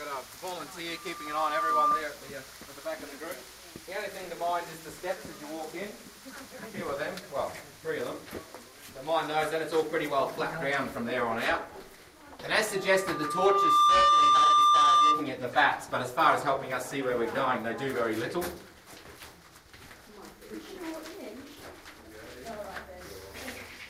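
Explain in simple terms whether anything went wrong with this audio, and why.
A thin, piercing whistle rises out of the sound twice, first from 0.89 to 2.07 s and again from 12.63 to 15.33 s. Each time it swells over roughly a second into a steady squeal at 1.2 kHz. This is loudspeaker feedback squeal: a microphone picked up its own loudspeaker, and at that one pitch the sound looped round louder each pass until it took over.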